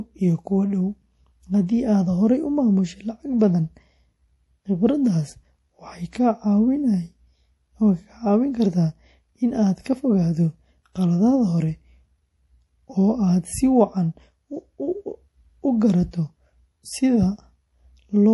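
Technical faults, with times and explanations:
Throughout, MP3 compression: the speech has a watery, swirling quality, with metallic chirps on s sounds and smeared consonant attacks, and nothing is heard above 11.5 kHz. The likely cause is an encoder starved of bits, which fits a low rate around 48 kbps. It removes all treble above a fixed frequency and drops quieter spectral lines. Those lines switch on and off from frame to frame, producing the swirl and chirping.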